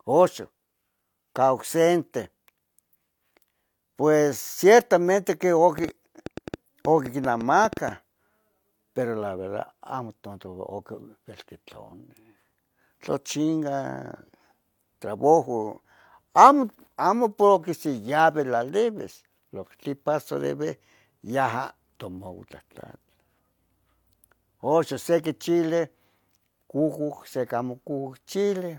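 A train of clicks runs from 5.78 to 7.89 s in this speech recording, starting right after "pues ciertamente que". Around fifteen similar pulses arrive at about 6.7 per second, unevenly spaced, and sit roughly 5 dB above the speech, so they read as ticking or popping on top of it. A repeated pulse of much the same shape like this likely comes from electrical interference from nearby equipment, or from a faulty connection or power supply feeding spikes into the signal.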